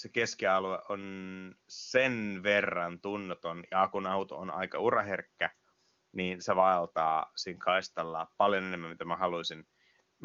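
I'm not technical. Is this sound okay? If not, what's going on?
Yes, nothing in this speech has gone wrong. It has the sound of an HD Voice phone call carried by the AMR wideband codec, which keeps sound up to about 7 kHz, so it sounds fuller than an ordinary phone line but not quite like a studio recording.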